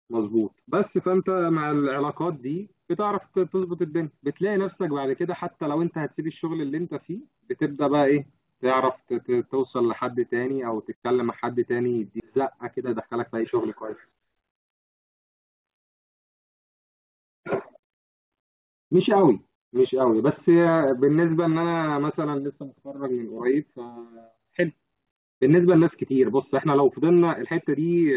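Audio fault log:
12.2 s, skip ahead: about a second of speech is dropped after later audio was already queued, so playback leaps forward and the two sides join with no gap.
12.40 to 13.63 s and 14.11 to 19.33 s, jitter buffer speed-up: the overfilled buffer trims short pitch-period pieces repeatedly, so speech runs about 6% fast at unchanged pitch and sounds hurried.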